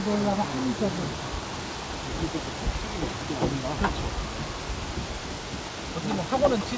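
The audio shows no technical faults, and the call path's trace is limited to a wideband band edge, with nothing above 8 kHz, which fits G.722 at 64 kbps.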